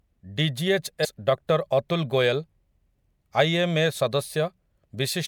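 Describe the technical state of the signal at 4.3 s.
At 4.3 s the speech signal is intact, with no dropout, clipping, glitch or other fault to be heard at that point.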